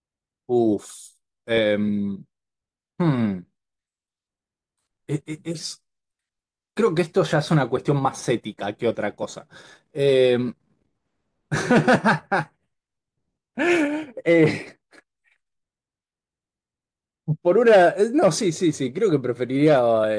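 No technical faults can be heard anywhere in the recording.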